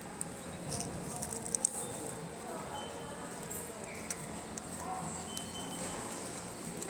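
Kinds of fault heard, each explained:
Nothing here stands out as a fault; the sound comes across just as it should the whole way.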